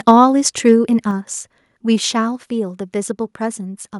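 Microphone overload, likely from input gain set too high, drives peaks about 1 dB past the converter's limit at 0.08–0.11 s, flattening a few percent of samples into a harsh crackle. At 0.11 s the microphone volume is stepped down, likely by call software reacting to that clipping, dropping sound and background about 2 dB at once. Microphone overload, likely the same excess input gain, cuts off peaks again at 0.67–0.72 s with the same brittle edge. A further microphone volume step-down, likely another automatic correction, lowers everything by about 5 dB at 1.11 s, an abrupt fall in level.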